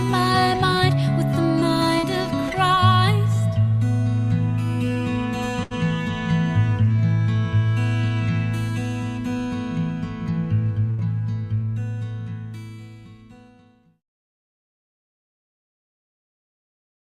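Short concealed packet loss at 1.99 to 2.06 s: about 40 ms of audio never arrived in time, and the receiver papered over roughly 37 ms of it by extending the sound that came just before, then crossfading back into the real signal. What you hear is a quick smear or small wobble, a fleeting blur rather than a clean cut, and whatever brief detail sat in that gap is simply gone.

Burst of packet loss at 5.63 to 5.73 s and again at 10.90 to 11.01 s: each time about 80 ms went missing in a row, too long for a seamless patch. The receiver stretched the preceding sound over about 74 ms in the first gap and 79 ms in the second, turning it down as the hole went on. That gives a held, fading continuation, after which the audio picks up further along with the intervening stretch lost.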